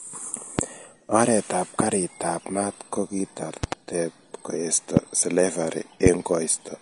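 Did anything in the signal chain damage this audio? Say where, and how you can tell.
Yes. The speech shows codec damage throughout. It is hissy and grainy, with smeared consonant attacks and nothing above 10.6 kHz. A spectrogram shows a hard shelf there and speckled, blocky treble. This is likely Vorbis compression at a low bitrate, around 37 kbps, where coarse quantisation replaces fine detail with noise.

Loud pops sit on top of the speech at 0.59–0.61 s, 1.80–1.83 s just before "ab mat ko", 3.64–3.75 s (a double pop), 4.97–4.99 s, and 6.06–6.09 s just after "koesto slavari". Most peak about 20 dB above the signal, and the second about 15 dB. On a waveform they are tall, narrow spikes, and on a spectrogram they are full-band vertical lines. They likely come from voltage steps in the analogue wiring or a driver glitch.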